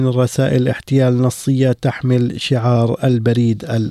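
Nothing stood out as a technical fault on listening to this clip.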